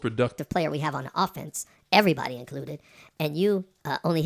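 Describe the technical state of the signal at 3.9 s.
At 3.9 s the speech sounds high and hurried, running about 1.45 times too fast and roughly 6.5 semitones sharp. This is a wrong sample rate fault, present from 0.38 s to the end: audio recorded near 22 kHz is being played at 32 kHz unconverted, raising speed and pitch together.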